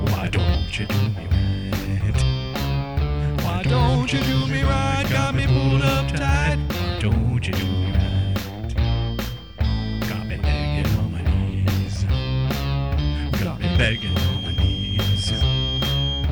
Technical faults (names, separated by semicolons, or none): feedback whistle